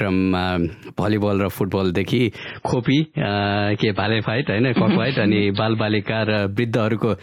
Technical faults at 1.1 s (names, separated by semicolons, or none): none